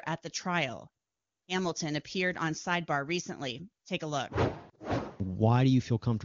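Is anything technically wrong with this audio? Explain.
No, nothing technically wrong can be heard in this speech. It carries the band-limited character of the AMR wideband (HD Voice) codec, with only faint coding damage at most, which fits its highest rate of around 23.85 kbit/s.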